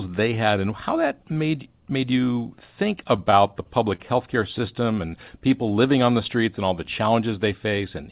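Packets reached the receiver late or more slowly than they were played between 3.16 and 4.01 s in this speech clip, so the jitter buffer ran dry five times. Each time, the receiver bridged the wait by continuing the last sound, about 86 ms in total, the longest gap 35 ms, roughly a tenth of that span. Nothing is lost, but the speech drags and stutters there. This is repeated stalls (stutter). The call path itself, with nothing above 4 kHz, points to G.711 mu-law coding.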